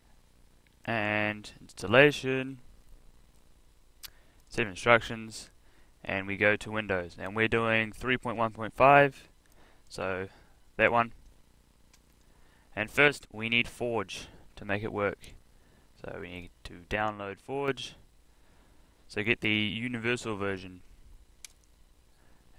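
There are two sudden gain jumps, at 13.08–13.32 s and 16.96–17.68 s, where sound and background drop together by about 6 dB, likely an unramped digital gain change.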